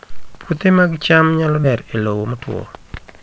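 At about 1.64 s, just after "mag cham nyalo", the speech skips ahead. Roughly 0.7 s of audio was dropped while later packets were already queued, and the two sides are spliced with no silence. On a spectrogram the harmonic pattern changes abruptly at a sharp vertical seam, and the waveform shows a sudden shape change rather than a gap.

From 1.88 s to 3.21 s a jitter buffer speed-up follows. The buffer was holding excess audio, so short pitch-period chunks were repeatedly cut out, about a fifth of a second in total. The speech runs at 114% speed without rising in pitch and sounds hurried. On a spectrogram the syllables look compressed in time while the harmonic spacing stays unchanged.

Across the whole clip the spectrogram is empty above 8 kHz, as expected from the G.722 call codec.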